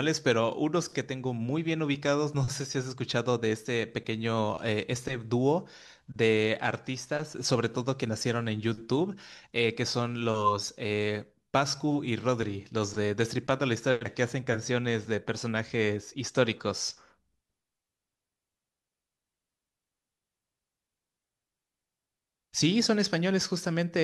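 No technical faults can be heard anywhere in the speech. Nothing in the recording calls for a time mark or an account of something going wrong.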